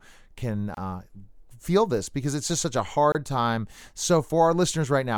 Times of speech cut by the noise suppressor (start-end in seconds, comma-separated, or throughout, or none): none